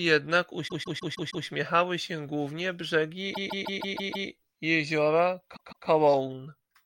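Speech with repeated frames, heard as a stutter three times. The same 0.16 s slice plays over and over from 0.67 to 1.45 s (five extra plays), from 3.33 to 4.27 s (six) and from 5.55 to 5.87 s (two). The block length fits a run of about six compressed frames being written or sent again. Unlike a dropout, no sound is lost: identical chunks recur back to back, stretching the audio by about 0.8, 0.9 and 0.3 s.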